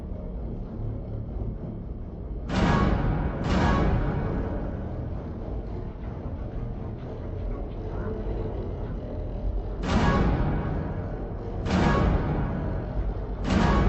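Stereo read as mono runs through the whole clip: the audio plays at half speed and an octave low, a drop of 12 semitones. Alternating left and right samples from a two-channel file have been taken as consecutive samples of a single channel, so each moment of sound is stretched across twice as many samples. A fainter mirrored copy of the sound also shows up in the upper half of the spectrum, produced by the interleaving itself.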